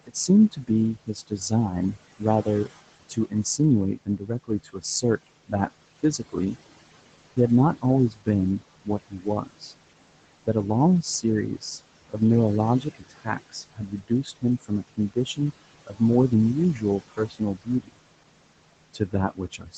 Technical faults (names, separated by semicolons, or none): noise suppressor artifacts; speech cut by the noise suppressor